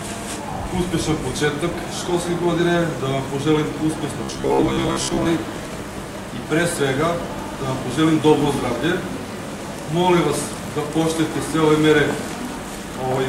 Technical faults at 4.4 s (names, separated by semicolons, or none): robotic sound from repeated short buffers